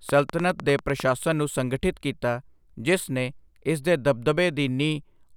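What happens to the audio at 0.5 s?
A train of clicks runs from 0.09 to 1.01 s, about ten evenly spaced pulses at roughly 10 per second, each standing well above the speech. This is likely interference from nearby equipment or a faulty connection or power supply. Unlike random crackle, the clicks share one shape and keep a steady, metronome-like pace.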